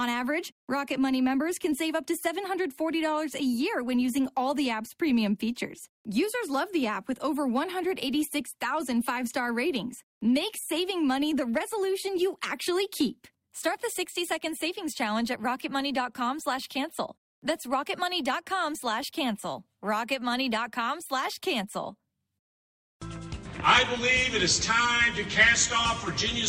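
No technical faults can be heard anywhere in the audio.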